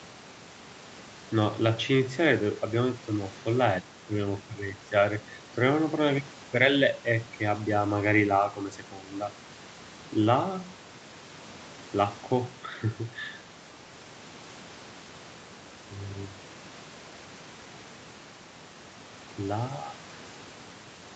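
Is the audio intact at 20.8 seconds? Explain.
Yes, the audio is intact at 20.8 seconds, with no fault at that moment.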